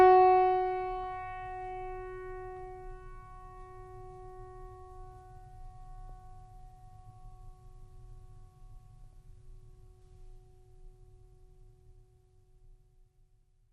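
Throughout the music there is plainly audible MP2 compression, most likely from MPEG Layer II coding at a low rate; the dullness points to something around 80 kbps. With so few bits shared across the 32 sub-bands, the upper bands keep switching off and back on, and the surviving bands are coarsely quantised. The top end sounds muffled, with a gurgling, grainy texture.

DAB burbling appears three times. The first runs from 0.94 to 1.03 s, then brief bursts follow at 6.09 s and 9.13 s. Bit errors have slipped through the error correction into the MP2 data, corrupting samples, so short blips of noise land in single sub-bands. The last burst fits a noticeably higher error rate than the first two.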